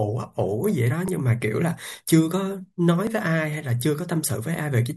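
Audio missing between chunks at 1.08 s and 3.07 s: each time, a few milliseconds of this speech drop out and the two sides butt together with no gap, about 2.0 s apart, likely where a chunked recorder lost a sliver while changing chunks.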